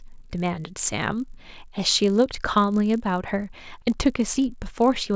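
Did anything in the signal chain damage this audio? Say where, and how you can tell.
Yes. Resampling between converter and driver, the resampler restarted on every block, damages the whole speech clip. A steady 50 Hz buzz rides under the speech from start to finish, one small tick every 20 ms. Each block was converted from 48 kHz to 16 kHz in isolation, so its edges lacked their true neighbouring samples and picked up a small error. Unlike mains hum, the buzz disappears in the pauses, since it exists only where there is signal.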